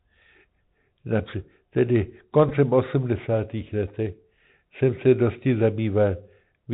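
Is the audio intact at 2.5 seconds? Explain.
No. At 2.49 s a Bluetooth headset packet repeat occurs: about 11 ms of lost audio, consistent with three dropped packets, is filled by re-decoding the previous packet, giving a brief buzzy tick. The Bluetooth CVSD headset codec is active here too: its one-bit adaptive coding cuts everything above 4 kHz and adds granular hiss with scratchy sibilants.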